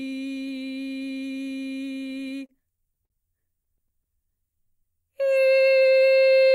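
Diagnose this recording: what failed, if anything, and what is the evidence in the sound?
The network side failed, showing up in the receiver's jitter buffer. From 2.07 to 3.12 s there are repeated stalls (stutter): seven brief hitches, the longest about 50 ms, adding roughly 120 ms of stretched-out sound. The same happens again from 3.64 to 4.06 s with four tiny catches of about 13 ms at most. Packets arrived late, the buffer kept running dry, and the receiver extended the last bit of music each time. Nothing is actually lost, but the music drags and hiccups.

Right after that, from 4.25 to 4.82 s, there's a jitter buffer slow-down. The music plays at about 94% speed without any drop in pitch, so it sounds slightly drawn out, and roughly 35 ms gets added over that stretch. The buffer was running low or had just raised its target delay and needed a reserve, so it repeated short pitch-period chunks to build time back up, rather than stalling outright again.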